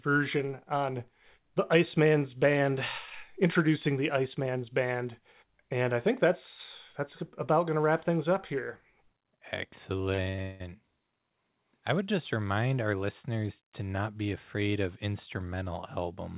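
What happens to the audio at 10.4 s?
Packets were repeatedly lost or late from 10.14 to 10.62 s: four gaps, the longest 179 ms, each patched by extending the last sound, so over half the stretch is concealed. The result is choppy, robotic-sounding audio with pieces missing.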